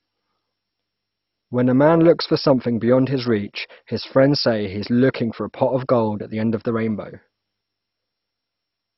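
Speech throughout shows MP2 compression, likely at a low bitrate: dull, gurgling and granular, with nothing above 5.6 kHz and upper bands flickering, unlike steady low-pass dulling.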